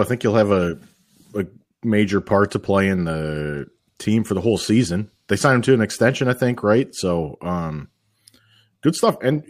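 No technical faults are audible.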